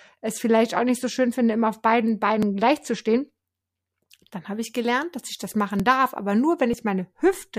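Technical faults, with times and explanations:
4.53 to 6.53 s, pre-emphasis left on: the CD 50/15 µs treble lift was never undone, leaving highs about 8 dB hot at 10 kHz, so speech turns thin and sibilant.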